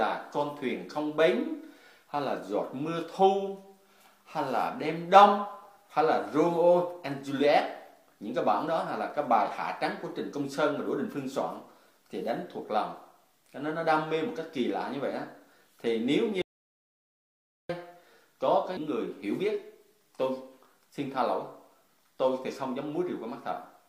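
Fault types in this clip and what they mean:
Audio dropout to silence: the sound cuts off abruptly and gives way to silence for about 1.28 seconds before resuming mid-flow, with no room tone or background noise bridging the gap. Whatever was happening in that stretch is simply missing. The likely cause is that the input signal was interrupted, perhaps by a loose connection, a dropped link or an accidental mute, while the recording chain kept writing silence.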